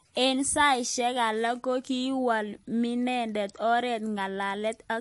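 Throughout, the speech sounds watery and smeared. This is likely MP3 compression at a bitrate near 48 kbps. A spectrogram shows a hard ceiling at 11.3 kHz, with flickering gaps below it.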